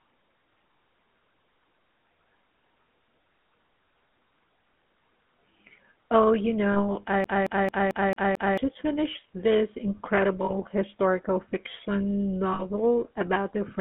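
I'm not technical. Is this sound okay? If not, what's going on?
No. Three things are wrong with this speech clip.

The whole recording has passed through the GSM full-rate codec, the compression used by early mobile phones. It rebuilds speech from a rough model of the voice fed with evenly spaced pulses, which gives it a buzzy, gravelly edge, and it keeps only the band between about 200 Hz and 3.4 kHz, so it sounds thin and phone-like. Unlike a brief glitch, this roughness never lets up.

There are also lost GSM frames at 6.72 s, 10.45 s and 12.53 s. Each lasts only 40 to 60 ms. When a chunk of the phone signal failed to arrive, the decoder reused the last good chunk, so you hear a short metallic ring or smear where the sound should be. It never repeats as a rhythm, which sets it apart from the stutter described next.

From 7.24 s to 8.58 s the audio behaves like a CD stuck on one turn, as if a scratched disc kept jumping back to the same spot. 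The same short piece, about 0.22 s long, plays over and over with a tiny gap at each jump, repeating six times. This gives a fast, even, machine-like stutter. The lost frames, by contrast, are single smeared moments rather than a loop.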